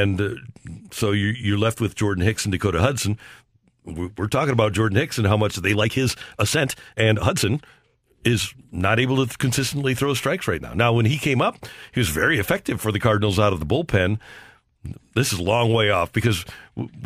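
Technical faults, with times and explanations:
5.70 to 8.72 s, time-stretched section: the speech suddenly rushes ahead at about 1.54 times its normal pace while the pitch stays put, so it comes across hurried. That's likely software squeezing the passage to fit a length by dropping short slices of audio.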